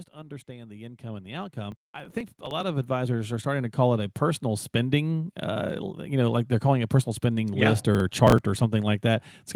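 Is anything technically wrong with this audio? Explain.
Yes, there are two problems in this speech recording.

The first is automatic gain rising, from 0.11 s to about 5.42 s. The gain control decided the input was too quiet and kept pushing its gain up, about 19 dB in total, over more than five seconds. Because it's amplifying the whole signal, the speech and the room noise behind it swell together, so the background creeps up along with the voice instead of staying put.

The second is processor overload crackle, in two bursts: 1.72 to 2.63 s, and 7.95 to 8.57 s. The processor couldn't finish its very short audio buffers on time, which points to buffers around a millisecond and a half, and it missed a run of them, something like twenty in each burst. Each missed buffer was simply skipped, leaving a tiny hard-edged gap. Strung together, those gaps sound like a gritty crackle riding on the speech, which stops once the load eases.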